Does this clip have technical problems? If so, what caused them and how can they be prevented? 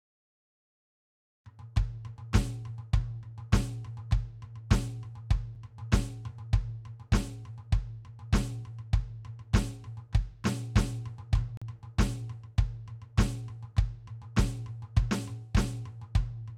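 Yes. The music has two gaps between stream segments, a hard-edged silence at 5.55 s and another from 11.57 to 11.62 s. Segment timestamps leave holes of about 7 ms and 43 ms, which the player fills with silence. The spacing fits 6-second segments, and no audio is lost. Prevent this by making each segment's start timestamp exactly match the previous segment's end.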